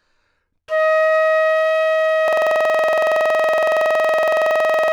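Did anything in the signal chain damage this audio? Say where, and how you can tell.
Yes. At the driver or buffer stage, a system hang loop starts at 2.28 s and runs to the end. The host stopped supplying audio while the hardware kept replaying one 46.4 ms block, which fits a 2048-sample ring buffer, producing a rapid stutter repeating at 21.5 Hz.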